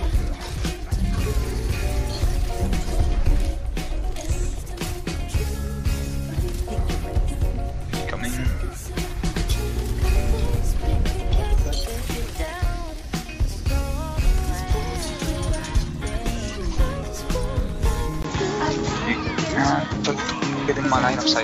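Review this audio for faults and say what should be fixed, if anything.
At 18.22 s there is a 20 ms gap, and the sound changes for the rest of the clip. Everything above 7.6 kHz is gone, so the tone turns duller. The level stays about the same. A new background noise appears, well below the signal. The likely cause is an input switched to a poorer device mid-recording. The new input passes a narrower band and brings its own noise floor.

To prevent it, lock the recording input so the system cannot change devices during capture.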